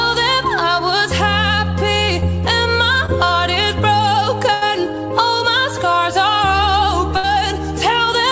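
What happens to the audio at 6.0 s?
Nothing goes wrong at 6.0 s: the audio carries on intact through that moment, with only the steady band limit of the call path, which leaves nothing above 8 kHz.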